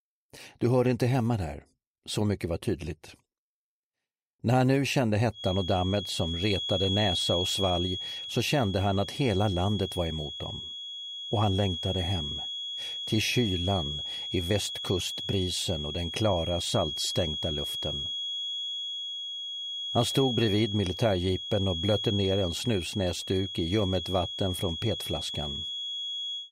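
From 5.30 s to the end, a feedback whistle sits behind the sound. It is a thin, steady tone near 3.3 kHz. It stays well below the main sound, perhaps ten decibels under it. Its level swells and fades slowly but never builds into a howl. The likely cause is a loudspeaker-to-microphone loop held just at the edge of feedback. At that point, one frequency keeps ringing on its own without running away.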